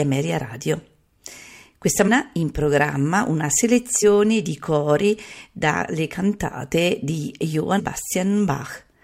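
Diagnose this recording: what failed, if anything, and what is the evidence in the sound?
Damaged data in a compressed stream, at the codec stage: brief disruptions at 2.07–2.09 s before "in programma una", at 4.02 s before "di cori dalle cantate", and at 7.78–7.80 s after "cori dalle cantate di". Corrupt frames throw the decoder out of sync until it finds the next frame header.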